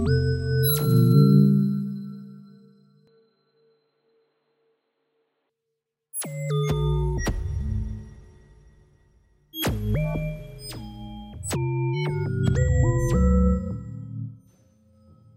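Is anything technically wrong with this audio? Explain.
Yes. An input switched to a poorer device between 3.07 and 5.50 s. The recording likely changed mid-take to a lesser microphone or a headset's call profile, which passes a narrower band. For those 2.4 seconds nothing reaches above about 4.4 kHz, so the sound turns dull and boxy, drops around 5 dB in level, and carries a faint new noise floor well below the signal. There is no gap at either switch, and the brighter sound returns abruptly at 5.50 s.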